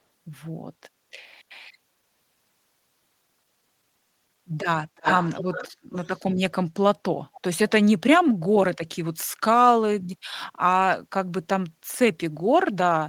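From 4.96 to 5.71 s, an echo leak returns the speech about 288 ms late and quite loud. Weaker echoes follow at 5.91 to 6.34 s and 7.34 to 7.41 s. A far-end echo canceller likely missed loudspeaker pickup.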